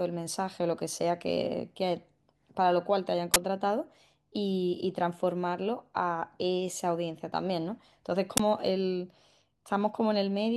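A speech recording in which the playback path twice sent out an audio block before any samples had been written into it, an uninitialised buffer fault, so whatever stale data sat in that memory was played as sound. Each time this produces an abrupt, loud burst of digital noise about 21 ms long, which fits a 1024-sample block, cutting through the speech at 3.34 s and again at 8.37 s.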